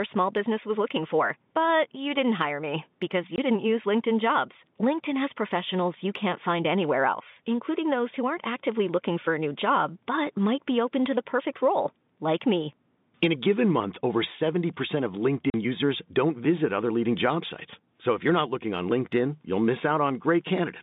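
A speech recording carried over G.711 telephone coding, band-limited to about 150 Hz to 3.7 kHz, shows packet loss filled with silence: hard-edged dropouts at 3.36 to 3.38 s (20 ms) and 15.50 to 15.54 s (40 ms), consistent with one and then two missing 20 ms packets replaced by silence.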